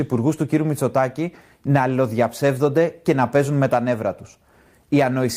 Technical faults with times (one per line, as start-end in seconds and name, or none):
none